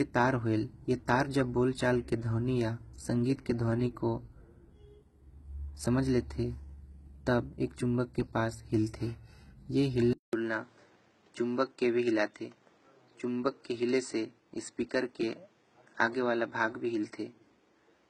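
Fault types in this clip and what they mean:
HE-AAC compression: Heavy codec damage, likely from HE-AAC at around 16 kbps, with nothing above 11.8 kHz and a copied-up treble that doesn't match the original.
Input switched to a poorer device: Likely a change of input at 10.13 s. After a 200 ms gap, everything above 8.3 kHz is gone, with new noise about 40 dB down.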